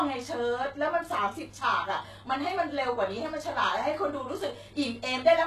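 Throughout the speech, the signal has likely been squeezed through HE-AAC compression at a rate that fits roughly 16 kbps. The treble is rebuilt by copying lower bands upward instead of being coded, so sibilants turn gritty and metallic, and nothing remains above 12.3 kHz.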